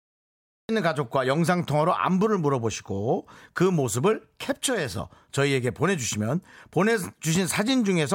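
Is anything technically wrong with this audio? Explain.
Yes, the speech has a cut-off start. From 0.0 to 0.69 s there is digital silence. At 0.69 s the speech begins abruptly mid-sound, with no natural attack, because capture started late.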